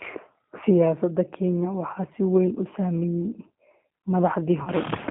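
The whole clip goes through a G.729 codec at 8 kbit/s, squeezing the speech into roughly 150 Hz to 3.7 kHz and leaving it plainly rough and synthetic. Around 4.63 to 4.72 s there's VoIP packet loss concealed by the speech codec. About 40 ms went missing, and the decoder stretched its last frames into a fading buzzy tone or coloured noise before the speech recovered.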